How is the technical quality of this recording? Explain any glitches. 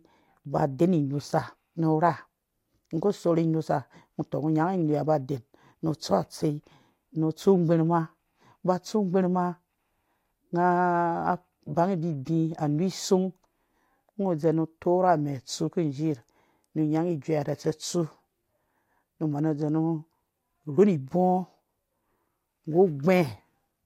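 One glitch stands out, a short burst of DAB burbling from 12.82 to 12.91 s in the speech. Under weak reception, a low rate of bit errors, about 0.07 percent, slipped past error correction into the MP2 stream, and corrupted samples put short blips of noise into individual sub-bands across three frames. The result is a few brief watery blips over the sound. Unlike a dropout, the audio never goes silent.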